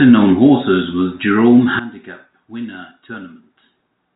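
At 1.79 s the level drops abruptly by about 16 dB and stays down to the end of the clip, a sudden gain jump. The speech and the background fall together in a single step, with no fade, which points to a gain setting or bit shift that was likely applied instantly rather than ramped. The band-limited telephone sound, with nothing above 3.8 kHz, continues unchanged at the quieter level.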